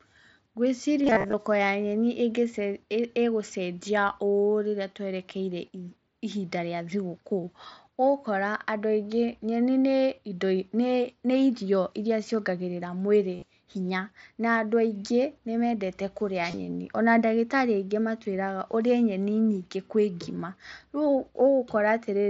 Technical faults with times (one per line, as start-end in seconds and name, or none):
1.04-1.33 concealed Bluetooth headset packet loss
13.36-13.42 concealed Bluetooth headset packet loss
16.51-16.54 concealed Bluetooth headset packet loss